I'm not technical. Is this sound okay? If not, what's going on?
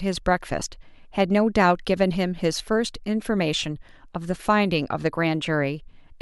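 No. The speech has two brief glitches, at 0.60 to 0.62 seconds and again at 2.58 to 2.60 seconds. Both are lost LE Audio frames: a short piece of the Bluetooth audio stream, about 15 milliseconds each time, fitting roughly two frames, never arrived. The decoder filled each gap by reusing the last sound it had with its fine detail scrambled, so you hear a quick rough, hissy blur where the speech should be.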